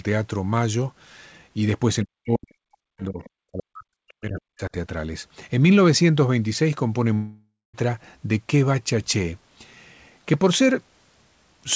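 From 2.03 to 3.23 s and again from 3.48 to 4.71 s the talker's speech drops in level by as much as roughly 40 dB, fading and breaking up over about a second each time, which is likely speech suppressed in double talk, with the echo canceller muting near-end speech while the far end is active.

Between 3.23 and 3.3 s a brief, faint scrap of a second voice comes through at roughly 30 dB below the main speech, likely the other side's voice leaking through, where loudspeaker echo escaped cancellation and reached the microphone.

At 7.14 s a long network dropout likely begins, with about 0.6 s of audio lost. The receiver stretches the last sound into a decaying buzz that gives way to a short near-silence before speech resumes at 7.75 s with that section missing, all within a band that stops at 8 kHz.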